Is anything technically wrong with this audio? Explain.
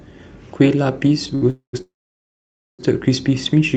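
Yes. The audio has timing faults introduced in transmission, heard over a call path whose response stops at about 8 kHz.

From 1.35 to 1.44 s there is a short stall from a late packet. A packet arrived after it was due, so the jitter buffer emptied. The receiver held the last sound for about 66 ms, then resumed from the same point. That sound is stretched, and nothing is lost.

Two call audio freezes follow, likely caused by packets held up in transit. From 1.50 to 1.75 s, about 232 ms is filled: the last sound continued and fading, then about 110 ms of silence. From 1.81 to 2.81 s the fill lasts nearly a second, mostly silent (about 900 ms). Each time the audio resumes where it stopped, so the gaps are inserted, not cut out.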